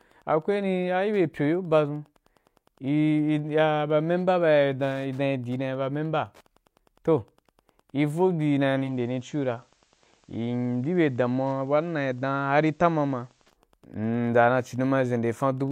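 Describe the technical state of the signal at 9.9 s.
At 9.9 s the radio is in a digital radio blend to analogue, lasting from 8.79 to 13.59 s: it has cross-faded to the FM broadcast, so the speech continues but drops about 2 dB and gains hiss about 40 dB below. That continuity is what separates it from a dropout or mute. Wi-Fi interference runs under it throughout: the nearby radio's beacon is rectified into faint ticking every 102.4 ms, about 40 dB down. Its strict regularity, about ten per second, distinguishes it from random crackle.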